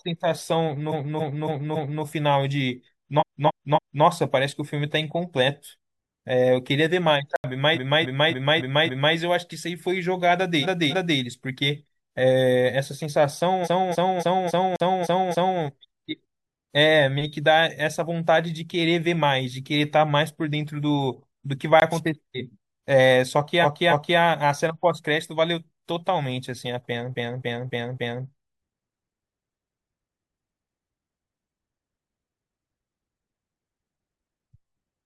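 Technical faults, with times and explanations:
0.91–2.02, 3.18–4.02, 7.73–9.13, 10.61–11.17, 13.63–15.58, 23.62–24.17 and 27.10–28.21 s: repeated frames. The same 0.28 s block, which fits about six compressed frames, replays 4, 3, 5, 2, 7, 2 and 4 extra times. Each run is a stutter, and it lengthens the audio by 0.56 to 1.95 s.
7.36–7.44, 14.76–14.80 and 21.80–21.82 s: block of digital silence. The sound drops out for 80, 40 and 20 ms. This is most likely because the output buffer was not filled in time. The sound cuts out and back with no fade, and the second falls inside a stutter run.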